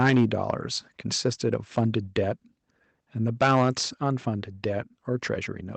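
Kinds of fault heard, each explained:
Microphone overload: The loudest speech peaks are squared off with a harsh, crackly edge, likely because the input was driven past the converter's limit. It is heaviest over 0.0–0.51 s and 3.41–3.81 s, about 8 dB over, and lighter across 1.53–2.17 s, about 5 dB over. A waveform shows flat-topped peaks, and a spectrogram shows broadband vertical smearing and added harmonics above the voice at those moments.
Microphone volume stepped down: At 0.1 s and again at 3.43 s, each time inside a distorted burst, voice and background both drop by about 2 dB in a single step, likely the call software reacting to the overload by lowering the microphone's input volume. On a waveform the envelope steps down abruptly and stays lower. A spectrogram shows the whole frequency range dimming slightly at one instant rather than fading.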